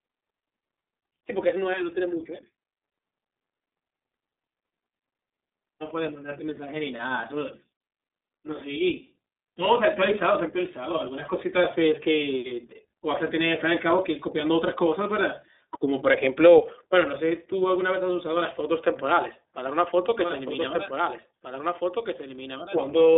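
Throughout the recording, the speech carries the mark of the iLBC codec: a narrowband VoIP coder that rebuilds each 30 ms frame's excitation independently. Nothing survives above 3.8 kHz, and the line band sits at roughly 250 Hz to 3.7 kHz, so a spectrogram shows a hard ceiling with empty space above it. The plainly audible coding damage gives the voice a rough, slightly synthetic edge, consistent with the 13.33 kbps mode.

From 20.19 s to the end, a doubled audio track appears. A second full-band copy of the same speech runs about two seconds behind the original at a few decibels lower, around 5 dB down. It is most likely a second capture path or an edit holding two misaligned copies. It enters abruptly, with no reverb tail or room colour, so the waveform shows overlapping, repeated speech envelopes offset by that fixed lag.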